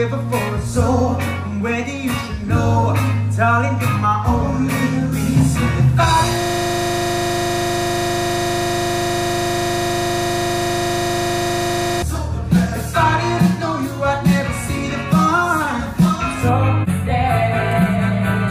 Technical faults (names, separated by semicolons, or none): system hang loop; channel delay (comb filtering)